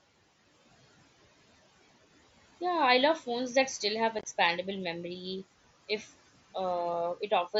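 A speech recording with two faults. At 4.19 to 4.25 s, right after "phones that still have", there is unconcealed Bluetooth headset packet loss: about 37.5 ms of audio drops out, scattered over 60 ms, with the longest gap 22.5 ms. Silence or an idle pattern replaced the missing packets, which fits roughly five lost frames of 7.5 ms. On the waveform these show as flat, hard-edged gaps, and on a spectrogram as thin vertical blank strips. From 5.88 to 6.18 s, speech is cut by the noise suppressor, which treated part of the voice as background. Roughly a fifth of a second is pulled down by up to about 11 dB, so that stretch sounds swallowed and faint. It appears as a dip in the waveform envelope and as dimmed, thinned energy in the spectrogram, without any abrupt edge.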